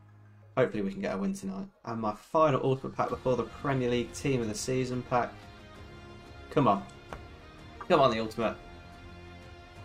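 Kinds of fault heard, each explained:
Nothing in the audio registers as a technical fault.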